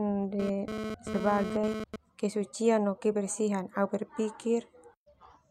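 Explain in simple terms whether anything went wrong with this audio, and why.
A harsh, raspy buzz sits under the speech from 0.40 to 1.96 s, stopping just before "kesucian no kebersihan". This is GSM phone buzz: a nearby 2G phone sending data in bursts 217 times a second, which the audio circuitry picks up as sound.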